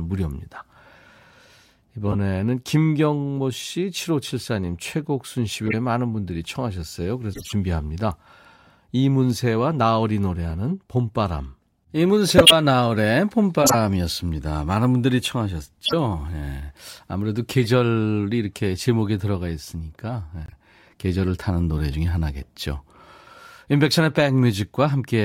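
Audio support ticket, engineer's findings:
Corrupt frame decoded at 2.08, 5.66, 7.33, 12.37, 13.62, 15.85 and 17.58 s: short chirps and noise bursts, some fairly loud, lasting several frames each. Decoder is playing damaged frames with misread gains. Spectrogram shows broadband smears.

Corrupt frame muted at 20.46–20.53 s: abrupt silence in the speech, a hole that fits two frame lengths. Decoder is rejecting frames and the player inserts zeros. Waveform shows a flat gap with timing preserved.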